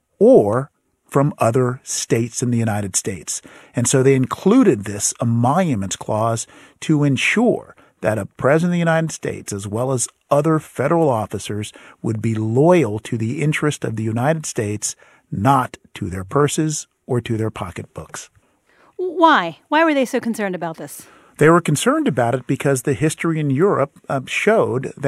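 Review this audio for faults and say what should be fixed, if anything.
Nothing here needs fixing: the speech comes across without any faults to flag, so you can leave it as it is.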